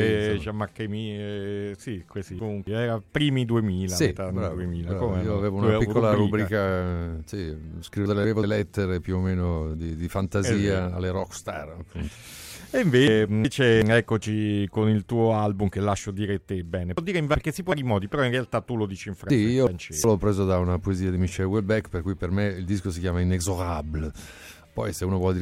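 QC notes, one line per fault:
2.12–2.67 s, 8.06–8.43 s, 13.08–13.82 s, 16.98–17.72 s, 19.30–20.04 s: frames out of order. Two adjacent blocks (about 280, 190 or 370 ms each) play swapped, giving a garbled flutter. The spectrogram shows abrupt vertical discontinuities, and the waveform shows misaligned envelope steps. No time is lost.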